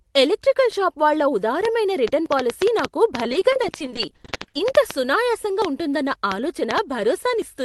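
Speech that's come through a call path, with its band topping out around 12 kHz. Right after "ఎలక్ట్రికల్ షాపు వాళ్ళ", from 1.65 to 6.79 s, there's a train of clicks: about 30 similar ticks at an uneven 4.8 per second, sticking out roughly 20 dB over the speech, likely interference or a faulty connection. There are also two dropped buffers (overruns), at 2.26 s and 5.62 s, where the audio jumps ahead, losing about 20 ms and 40 ms respectively. Between 3.23 and 4.60 s, repeated packet loss gives that choppy, robotic sound: dozens of short holes, none over 30 ms, patched by stretching the last sound, about 390 ms in all, roughly 28% of that stretch.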